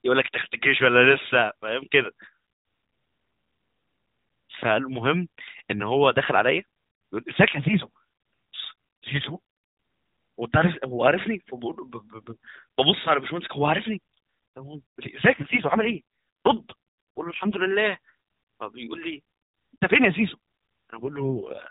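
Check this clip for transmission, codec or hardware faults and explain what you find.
Two kinds of fault turn up in the speech: one loud pop and two AMR rate drops, heard against the band-limited sound of an AMR narrowband mobile codec, which cuts everything above 4 kHz.

Loud pop, 4.63 to 4.65 s: a sudden voltage step, likely from a plug, switch or static discharge, is added to the signal path and shaped by the circuits after it. The result is one sharp pop, roughly 5 dB louder than the speech, while the speech continues underneath.

AMR rate drops, 15.34 to 17.68 s and 20.96 to 21.70 s: on a weak radio link the network tells the codec to spend fewer bits on the voice and more on error protection. The sound fits a drop from 12.2 to 4.75 kbps. The band stays the same and nothing cuts out, but the speech turns rough, buzzy and synthetic until the rate recovers.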